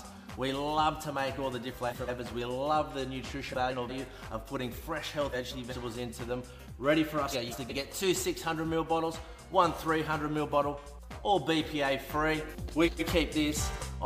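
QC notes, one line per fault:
1.71–2.09 s, 3.51–3.91 s, 5.32–5.73 s, 7.32–7.73 s, 12.71–13.02 s: frames out of order. Two adjacent blocks, about 186 ms each (139 ms in the last), play swapped, giving a garbled flutter. Spectrograms show abrupt vertical seams and discontinuous contours. Duration is unchanged.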